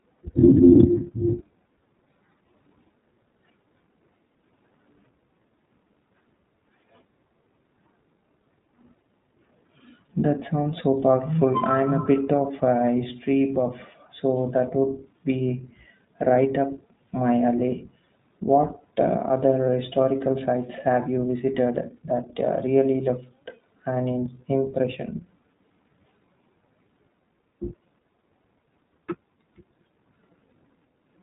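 The whole recording has passed through the iLBC codec, coding each 20 ms frame independently at what fits 15.2 kbps, so nothing above 3.8 kHz survives and the speech sounds plainly rough and synthetic.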